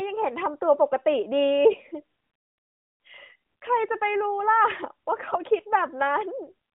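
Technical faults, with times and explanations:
1.70–1.77 s and 5.28–5.37 s, AMR bit errors: the sound turns briefly hoarse and gargly while keeping roughly its pitch and level. Weakly protected bits flipped at around one in twenty, misplacing excitation pulses and skewing fine pitch, gain and spectral values across what sounds like three and four 20 ms frames.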